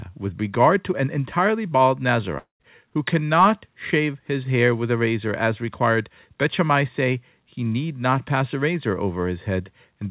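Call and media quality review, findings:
Long network dropout, 2.38–2.62 s, between "to an entirely bald" and "who cannot shave his". Buzz fades to silence, then resumes past the gap. Likely lost packets on the G.711 call path.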